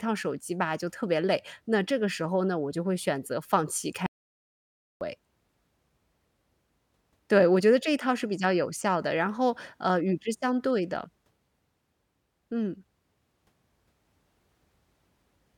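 At 4.06 s the speech cuts off mid-flow and the audio drops out to silence until 5.01 s, losing about 0.95 s. The gap is silent, with no room tone or hiss underneath, which points to the input likely being lost, from a disconnected device, a failed link or a stray mute, while the recorder kept writing empty samples. On a waveform it shows as a flat line; on a spectrogram, a solid black vertical band with hard edges at both ends.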